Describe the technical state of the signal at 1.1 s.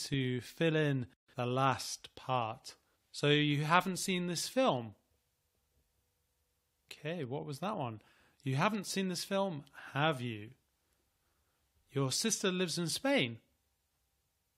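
At 1.1 s the speech signal is intact, with no audible technical fault at that moment.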